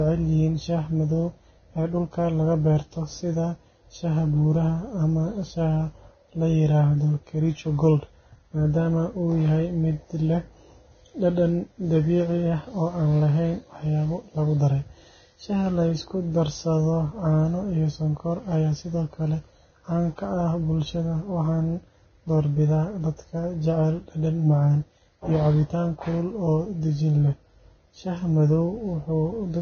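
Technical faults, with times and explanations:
Throughout: Vorbis compression, heavy. The speech has nothing above 6.5 kHz, and the upper band turns hissy and grainy, with roughened tone and smeared consonant onsets, likely from low-bitrate Vorbis encoding near 18 kbps replacing fine treble detail with coarsely quantised noise.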